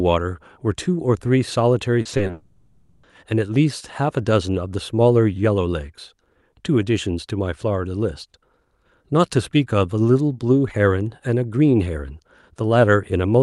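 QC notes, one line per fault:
2.01–2.31 s, repeated packet loss (robotic sound): four gaps opened in quick succession, the longest gap 40 ms, and each hole was patched by extending the preceding audio. About a third of this stretch is concealment, so the sound turns choppy, with roughly 100 ms absent.
2.31–3.05 s, long network dropout: a long interruption in arriving audio is the likely cause. For 720 ms the receiver keeps stretching the last sound instead of going silent, giving a smeared continuation that fades like a buzz or hiss, and the original audio from that span never plays.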